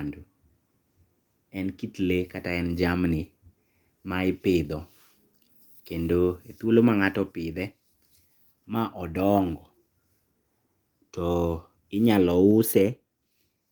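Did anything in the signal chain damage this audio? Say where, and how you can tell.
Yes. The damage is a microphone volume stepped down, twice. At 7.32 s and again at 12.51 s, the speech and the background drop together by about 3 dB. Each drop is instant, with no fade. Because the whole signal falls at once, this is a gain change, not a change in the talker. The stage is call processing. Its automatic level control likely lowered the device's input volume after judging the microphone too hot.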